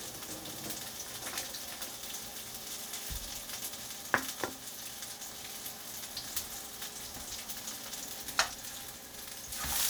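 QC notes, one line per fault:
Nothing stood out on listening to this recording of sounds.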